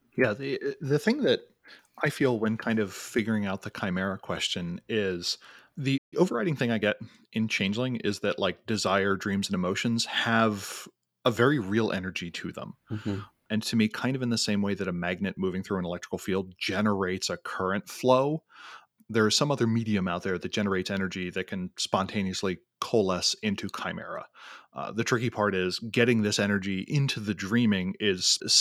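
A speech recording with a playback stall followed by time-compressed catch-up. At 5.97 s the player likely ran out of buffered data or had its output thread blocked, so nothing reached the output until 6.14 s. The speech cuts off mid-flow into a gap of roughly 144 ms of silence, then resumes. From 6.14 s to 7.08 s the player works off the backlog from that stall by removing short slices of audio and cross-fading the joins. This plays the speech about 1.15 times faster without shifting its pitch. Across that stretch the talking sounds hurried before returning to its normal pace.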